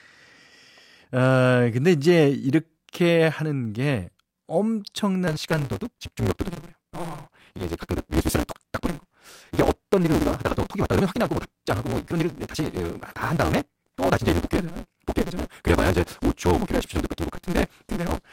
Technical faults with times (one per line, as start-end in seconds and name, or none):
5.27-18.32 block size mismatch (truncated)